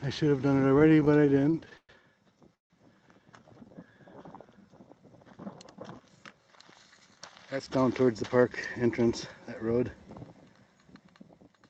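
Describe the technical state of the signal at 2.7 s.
At 2.7 s the signal is inside a call audio freeze running from 2.55 to 2.72 s. The audio stalls and falls almost entirely silent for about 150 ms, then resumes where it stopped with nothing lost, leaving everything after it about 152 ms later. The likely cause is delayed packets draining the jitter buffer. On a waveform this shows as a flat, near-empty stretch. On a spectrogram it is a blank vertical band cutting across content capped near 8 kHz.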